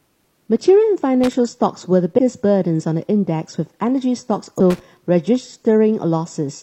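At 1.24 to 1.33 s the speech is broken by a loose connector crackle: a worn or dirty contact is making and breaking rapidly, chopping the signal and throwing pops where any DC on the line jumps. It sounds like an irregular scratchy burst laid over the speech. Nothing is lost from the timeline, which sets it apart from a skip. The same crackle returns at 4.70 to 4.80 s.

Between those, compressed frames are skipped at 2.14 to 2.19 s and again at 4.55 to 4.60 s. The decoder plays no audio for whole frames, so the speech jumps ahead, by roughly 100 ms the first time and roughly 200 ms the second. Those amounts fit a frame length of about 46 ms, two frames and then four.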